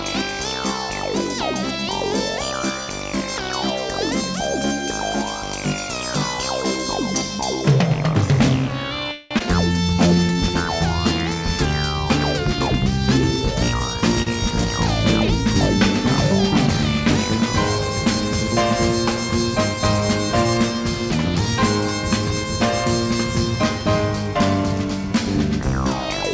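At 9.12 to 9.34 s a call audio freeze holds up the sound for about 186 ms. The last sound is carried on as a fading buzz that never reaches silence, and then the audio resumes where it stopped. The likely cause is delayed packets draining the jitter buffer, which leaves a gap inserted in the audio with nothing lost.

Immediately after, at 9.39 to 9.43 s, comes a skip ahead. Roughly a tenth of a second of audio is dropped, and only a 14 ms fill bridges the two sides. Playback jumps forward with an almost direct join. This removes part of the extra delay the freeze had just built up.

Jitter buffer slow-down follows from 9.94 to 10.73 s and again from 11.35 to 11.95 s. The receiver repeats pitch periods to rebuild its reserve, adding 65 ms and then 58 ms. The sound runs at 93% and then 92% of normal speed at an unchanged pitch, so it is slightly drawn out.

A jitter buffer speed-up runs from 13.40 to 14.02 s. 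The buffer held more audio than its target, so short pitch-period pieces totalling about 50 ms were cut out. The sound plays at 107% speed with its pitch unchanged and comes across as slightly hurried.

At 14.23 to 14.29 s a short stall from a late packet stretches the current sound by 34 ms until the packet arrives. Playback then continues from the same place, with nothing missing and only a brief held sound with a faint buzz or dip.

Throughout the clip, the call path's band limit leaves nothing above 8 kHz, which fits a G.722 wideband codec.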